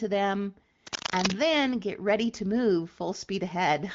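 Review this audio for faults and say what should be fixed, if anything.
From 0.87 to 1.34 s a dense, uneven scratching and rustling sits over the speech, roughly as loud as the speech itself. This is cable scratch noise, likely from a worn cable or connector being moved, so its contact resistance changes rapidly and adds bursts of noise. Replacing or reseating the suspect cable and fixing it in place so it cannot shift during recording should prevent it.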